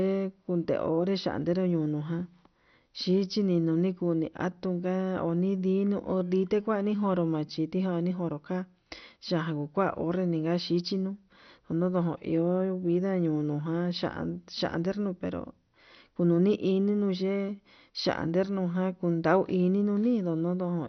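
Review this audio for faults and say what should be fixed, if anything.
The speech is dull for its whole length, with nothing above 6.1 kHz and a gurgling, granular texture as upper sub-bands switch on and off and the remaining bands are coarsely quantised. This is likely heavy MP2 compression, consistent with a bitrate around 48 kbps. Encode at a substantially higher bitrate, or use a more efficient codec, to prevent it.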